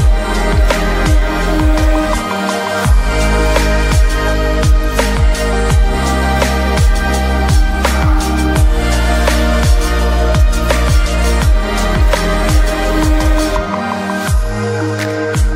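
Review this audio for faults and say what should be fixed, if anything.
Nothing here calls for a fix; no fault is audible anywhere in the audio.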